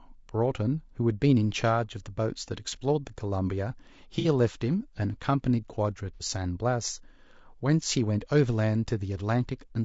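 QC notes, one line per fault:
throughout: low-delay AAC compression. The speech is rough and grainy, with noise between the harmonics and a thin, synthetic top band. This is likely AAC-ELD at around 32 kbps, where short frames resolve pitch harmonics poorly and leave too few bits for fine detail.
4.19–4.27 s and 6.14–6.23 s: AAC frame loss with concealment. Each spot has a brief smeared, noisy patch where the decoder fills the gap by repeating the last good spectrum. The patches are too short to fade into silence, and each fits about two lost frames.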